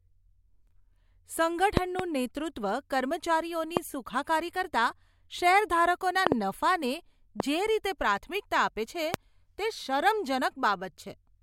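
Loud pops hit this speech recording at 1.77–2.02 s (two pops), 3.77–3.79 s, 6.27–6.34 s (two pops), 7.40–7.42 s and 9.14–9.16 s. Each rises roughly 15 to 25 dB above the speech, which continues underneath. They are likely sudden voltage pulses from a switch, plug, static or driver glitch.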